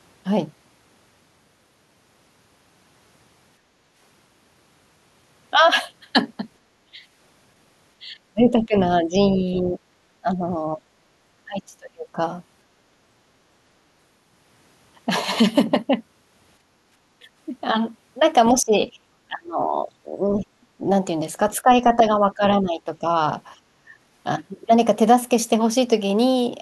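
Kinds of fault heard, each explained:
Background gated by the echo canceller: while the loudspeaker plays, the canceller turns the microphone down hard, so the room tone sinks by about 7 to 8 dB near 3.6 s and 16.6 s and then returns.
Speech suppressed in double talk: the talker's voice dips by roughly 15 to 30 dB across six stretches from 6.6 s to 23.9 s, likely because overlapping talk was treated as echo. The voice itself dips, not merely the room sound.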